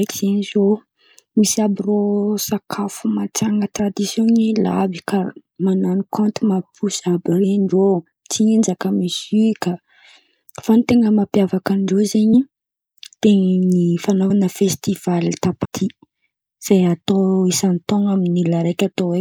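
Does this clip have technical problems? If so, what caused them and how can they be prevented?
Yes. Compressed frames are skipped at 3.78, 12.33, 14.29 and 15.64 s. Speech jumps ahead by roughly 20, 20, 50 and 150 ms, which fits a 24 ms frame. Error-protected storage or retransmission prevents this.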